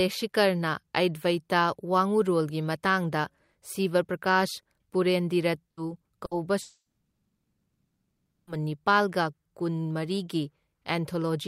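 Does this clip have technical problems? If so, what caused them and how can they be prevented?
Yes. A burst of packet loss hits at 5.71 to 5.80 s and again at 6.25 to 6.34 s: each time about 60 ms is lost, bridged by a briefly stretched, fading continuation of the speech before it resumes. Stronger forward error correction or a slightly deeper jitter buffer would cover gaps that short.

Then from 6.61 to 8.55 s there's what sounds like a long network dropout, likely the stream stalling entirely: a short fading tail, then roughly one and a half seconds of near silence before speech returns with that stretch gone. A more stable connection, wired rather than wireless, is the real fix here.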